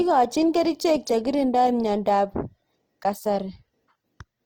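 From start to finish the speech sounds grainy and rough, with tones going noisy rather than swirly. That's Opus compression, likely in its music mode running short of bits, which fits about 16 kbps. Starved bands get filled with folded or noise content, though full bandwidth survives.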